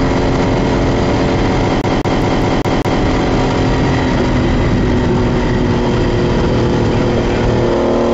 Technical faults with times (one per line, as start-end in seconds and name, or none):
1.81-3.02 CD stuck on one turn